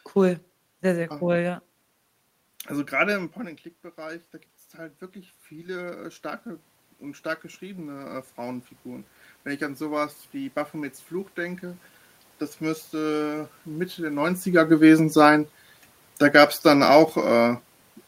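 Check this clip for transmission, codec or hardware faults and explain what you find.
Two slow upward swells in level come from automatic gain rising. From 2.71 to 6.52 s, ending just before "und stark geschriebene", the voice and the room noise grow louder together by about 5 dB. The input had dropped by about 12 dB as the talker moved back around 3 s, and the gain control answered by climbing gradually. A second, smaller lift of about 3 dB follows from 9.44 to 11.91 s, leading into "das müsste".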